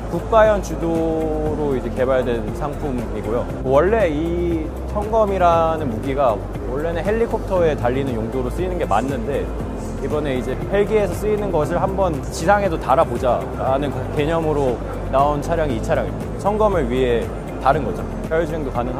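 No technical faults can be heard anywhere in the recording.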